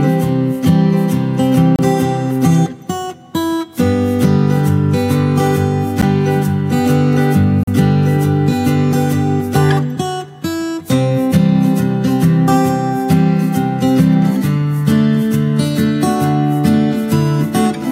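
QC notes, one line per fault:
1.76–1.79 s, 6.01 s, 7.63–7.67 s: block of digital silence, three dropouts of about 29 ms, 12 ms and 42 ms where the signal drops straight to silence and returns with no fade. The short 6.01 s gap fits a 512-sample buffer that was not filled in time.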